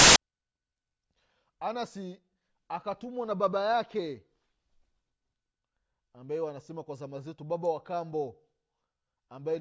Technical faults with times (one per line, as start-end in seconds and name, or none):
0.00-0.16 file tags played as audio